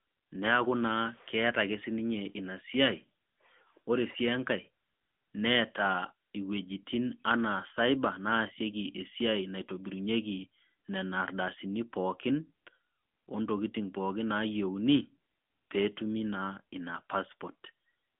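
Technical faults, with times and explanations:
Throughout, AMR narrowband mobile codec. The speech spans only 150 Hz to 3.5 kHz, with nothing above 3.6 kHz. The codec rebuilds the voice from a vocal-tract model driven by sparse pulses. This makes it plainly buzzy and synthetic, consistent with about 10.2 kbps.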